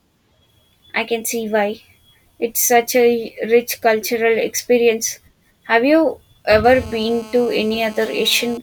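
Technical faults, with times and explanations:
6.64–8.58 s, GSM phone buzz: a hard, raspy buzz at 217 Hz, thick with harmonics and unrelated to the speech, holds steady about 22 dB below it. A nearby 2G handset on a call pulses its transmitter 217 times a second, and the audio circuitry rectifies each burst.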